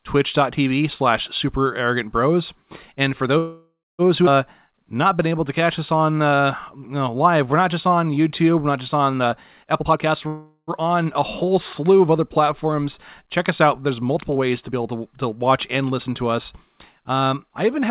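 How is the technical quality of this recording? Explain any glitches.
The recording has some real glitches: two freezes, a skip, and a stretch that drags and then rushes, all over a band-limited call path with nothing above 4 kHz, which fits a narrowband G.711-style phone codec.

Call audio freeze, 3.38 to 4.02 s and 10.27 to 10.70 s: the last sound gets stretched into a fading buzz, about 0.6 s the first time (ending in 230 ms of silence) and 0.4 s the second (50 ms silent), right before "on a". Likely cause: delayed packets draining the jitter buffer, so the receiver filled in until they arrived. Nothing's lost, just a gap inserted.

Skip ahead, 4.26 to 4.30 s: the playback jumps forward with almost no gap, dropping something like 0.4 s of speech. A chunk was discarded, either in transit or when the buffer overflowed, and the two sides are butted straight together.

Jitter buffer slow-down, 4.67 to 9.05 s: speech runs at 92% speed with the pitch unchanged, sounding drawn out. 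The buffer was rebuilding its reserve by repeating pitch periods, adding 357 ms in total.

Jitter buffer speed-up, 9.13 to 10.15 s: the opposite happens here. Speech plays at 134% and sounds hurried at the same pitch as the buffer trims short pitch-period slices, roughly 0.4 s overall, to pull its delay back down.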